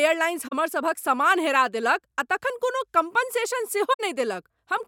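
At 0.47 s and again at 3.93 s the speech is hit by a brief concealment, about 54 ms and then 74 ms long, consistent with two and three damaged AAC frames. Each is a corrupt frame concealed: the decoder masked the bad frames rather than emitting a squeak.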